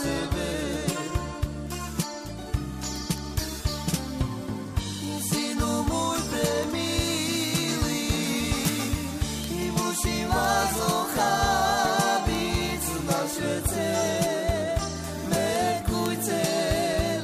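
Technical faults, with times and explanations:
0.12 to 17.21 s, word clock ticks: sharp ticks of uneven strength repeat about every 50 ms, some 300 in all, as an unlocked receiving clock running around 400 ppm off drops or repeats one sample at each slip. A spectrogram shows evenly spaced thin vertical broadband lines, and the waveform shows single-sample glitches.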